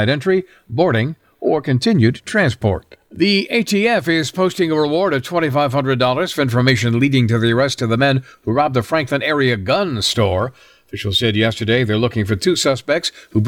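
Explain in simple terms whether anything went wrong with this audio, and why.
Nothing went wrong with this audio, because no fault can be heard anywhere in it.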